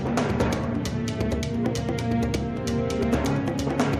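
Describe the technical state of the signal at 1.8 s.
At 1.8 s the signal is intact, with no audible fault at that moment.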